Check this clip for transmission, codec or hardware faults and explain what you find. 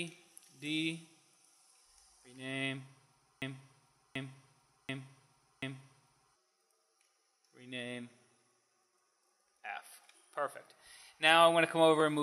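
There is one fault, a broken-record loop. From 3.42 to 6.36 s, a 0.74 s fragment repeats four times, likely from a stalled stream resending its last buffer. The waveform and spectrogram show identical blocks tiled back to back.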